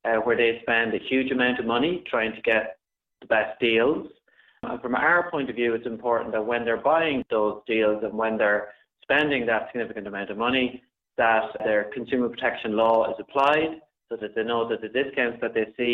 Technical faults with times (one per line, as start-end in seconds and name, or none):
none